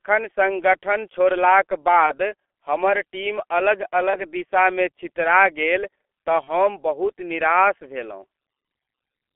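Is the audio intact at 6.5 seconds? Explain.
No. Between 6.44 and 6.60 s, just after "दिशामे छितरा गेल तँ" and before "बहुत निराश", there is VoIP packet loss concealed by the speech codec. The gap fits one lost 30 ms frame. The decoder stretched its last pitch and filter into a fading sound, and the speech stays weak for a while after real packets resume. On a waveform the envelope sags, and on a spectrogram the harmonics turn flat and uniform.

The G.723.1 codec also affects this moment, at 6.3 kbit/s. The spectrogram shows an empty band above 3.4 kHz and smeared, blurry consonant energy, which makes the speech sound muffled and hoarse.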